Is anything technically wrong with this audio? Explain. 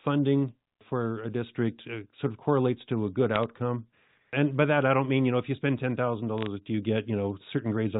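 Yes. Brief bursts of sharp ticking crackle come through at 3.36 to 3.44 s, after "correlates to a good", and at 6.38 to 6.46 s, between "know if you spend" and "do you". These are bit errors on a digital phone line: flipped bits, around 0.1 and 0.15 percent, corrupt single samples in the G.711 telephone-band signal.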